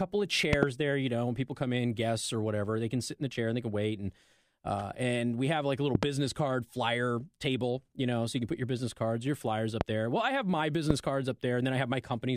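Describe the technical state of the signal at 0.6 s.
From 0.53 to 0.65 s, a loud pop: two thumps about 20 dB above the speech, likely a voltage spike, just before "there you know when".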